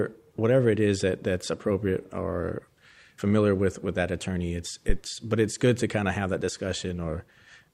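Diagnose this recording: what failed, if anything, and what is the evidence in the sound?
A single deep, low thump cuts into the speech at 4.89 s and has died away by 4.95 s. It peaks at about -10 dBFS and decays over roughly 13 ms. This is a phantom power thump, a fault in the analogue input stage: the supply on the live microphone input was switched, and that sudden DC step passed through the coupling capacitors into the signal path as a brief low-frequency transient before settling.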